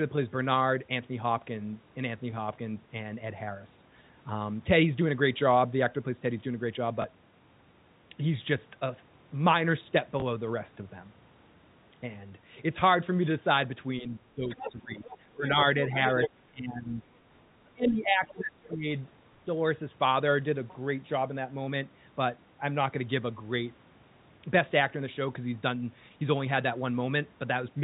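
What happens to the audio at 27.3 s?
At 27.3 s the speech carries on intact, with only the narrow telephone band of the G.711 coding and no fault of any kind.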